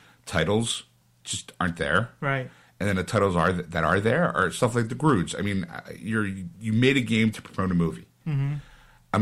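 No technical faults can be heard in this recording.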